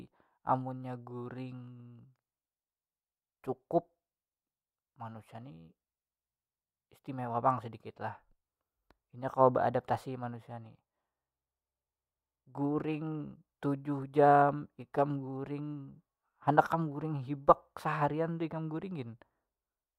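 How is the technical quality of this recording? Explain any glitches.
The recording has one glitch, in a short stretch of speech. From 10.51 to 13.27 s there is channel delay (comb filtering). One channel lags the other by about a single sample, and the mono sum cancels near 20 kHz. The top end sounds slightly dulled, not hollow. Unlike a low-pass filter, the loss comes from a summing notch.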